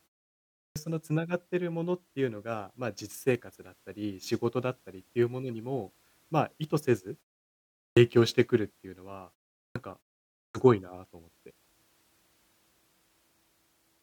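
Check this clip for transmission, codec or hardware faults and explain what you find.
One hardware fault is present: clipped start after a pause, at 0.67, 7.89, 9.68 and 10.47 s. Each time, the output device had idled through the preceding silence of 0.41 to 0.74 s and was still waking, so the first 75 to 87 ms of the speech is lost and the onset is abrupt. On a waveform or spectrogram, the speech starts at full level from flat silence, with no gradual attack.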